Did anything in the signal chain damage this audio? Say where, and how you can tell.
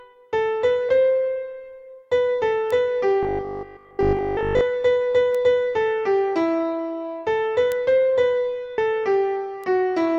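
Yes. At the codec or storage stage, compressed frames were skipped at 0.88 s and 8.78 s. A few frames, roughly 30 ms of audio, went missing or were rejected by the decoder. The sound jumps ahead by that amount at each join.

In the digital path, single-sample bit error spikes occur at 2.71 s, 5.35 s, 7.72 s and 9.64 s. In each, one flipped bit sends a sample off by a power of two and straight back. That is heard as an isolated sharp, broadband tick unrelated to the surrounding sound.

From 3.23 to 4.61 s there is robotic sound from repeated short buffers. It is a rigid, metallic 50 Hz buzz, with most of the stretch made of repeats. The cause is likely the driver or buffer stage being starved and looping a 20 ms chunk in place of fresh audio.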